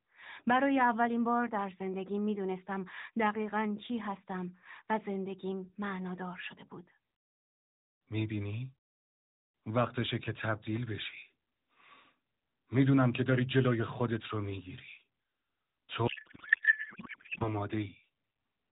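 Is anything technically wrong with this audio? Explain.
Yes. From 16.08 to 17.53 s there is a codec payload misread. The sender packed its AMR frames octet-aligned, but the receiver unpacked them as bandwidth-efficient, so every field sits a few bits off and the decoder builds sound from the wrong parameters. The speech turns into garbled noise and warble that barely tracks it. Unlike packet loss, the audio keeps flowing instead of dropping out or repeating, and the damage ends abruptly once the framing agrees again. The narrowband AMR-NB path underneath sounds lightly coded and capped at 4 kHz.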